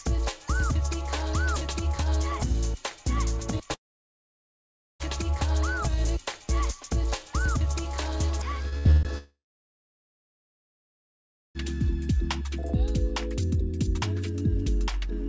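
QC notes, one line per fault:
3.74–5.03 s and 9.18–11.58 s, long network dropout: the stream stops arriving for about 1.26 s and then about 2.37 s, likely from the connection stalling. Each time the receiver briefly extends the last sound as a fading buzz or hiss, barely a few hundredths of a second in the first gap and about 0.2 s in the second. Then there is silence until audio returns further on, with the missing stretch never played.
8.69–8.75 s, short concealed packet loss: about 30 ms never reached the decoder in time. The receiver patched the hole by carrying the preceding sound forward, periodically if pitched and as shaped noise otherwise, then crossfaded into the real signal. The result is a quick smear or wobble rather than a gap. It opens a cluster of losses just before the second dropout.
8.78–8.88 s and 8.91–9.06 s, burst of packet loss: consecutive packets went missing, about 60 ms and then about 120 ms. 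The receiver kept extending and attenuating the last sound across each gap, so a held buzz or decaying hiss replaces the lost audio, with no true silence in the longer one. Playback resumes past the hole, so the sound jumps forward. Like the rest of the clip, these sit on G.722 call audio with nothing above 8 kHz.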